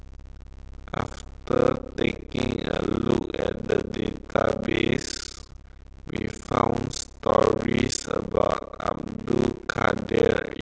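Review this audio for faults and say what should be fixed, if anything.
A block size mismatch (padded) runs through the whole clip: one stage hands over shorter blocks than the next stage reads, which fits 256-sample writes, and the remainder of each block is filled with silence. Those inserted gaps repeat at 33.3 Hz, heard as a steady buzz across the speech, and the speech plays back at 0.533 times normal speed while keeping about its natural pitch. Prevent it by making the writing and reading stages agree on one block size.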